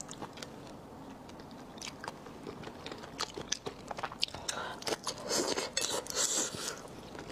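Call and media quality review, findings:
No faults found in this recording.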